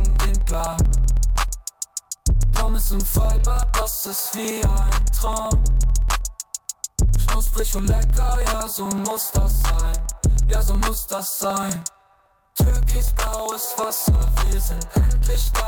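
A background process is stalling the USB bus or audio driver every 0.063 s, about sixteen times a second, from 0.10 s to 15.60 s. Each stall skips roughly a millisecond of audio outright, with no silence filled in, so the waveform jumps across the gap. These are periodic USB or driver dropouts: a few hundred evenly spaced ticks that form a steady rattling texture, audible wherever the signal is present.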